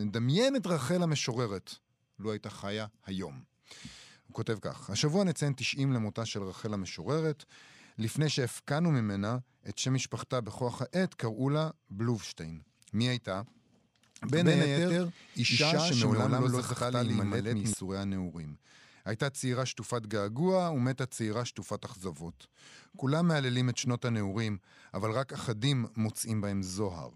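From 14.29 to 17.73 s, a doubled audio track appears. A copy about as loud trails by roughly 150 ms, starting and stopping abruptly. Likely a slower second capture path or misaligned edit.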